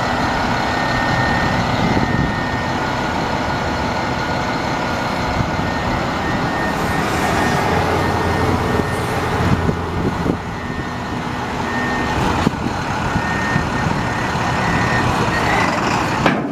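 At 3.65 s there's a quick glitch, a tiny blip lasting only about 14 ms. That's damaged data in the compressed stream: some bytes in that stretch got lost or scrambled, so the decoder couldn't make sense of the frame it was reading. It loses its place, then latches onto the next valid frame header and carries on decoding the sound from there.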